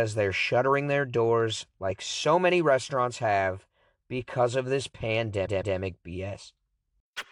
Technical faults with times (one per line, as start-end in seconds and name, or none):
5.45-5.76 repeated frames